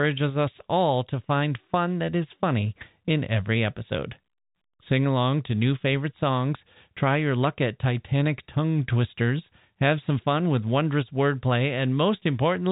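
Nothing goes wrong anywhere in this speech, which just sits in the usual narrow band of G.711 telephone coding with nothing above about 3.8 kHz, exactly as a phone line would carry it.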